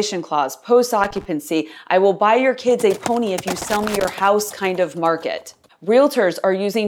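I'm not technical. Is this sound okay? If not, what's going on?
No. There are two bursts of loose connector crackle: from 1.04 to 1.25 s, right after "clause post", and from 3.59 to 4.05 s, between "a pony if you" and "house kind of market". A worn or dirty contact in a plug or socket keeps connecting and disconnecting as it shifts, chopping the speech into an uneven scratchy rattle. Unlike a single digital click or a clean dropout, this crackle is ragged and irregular, lasting a fraction of a second each time.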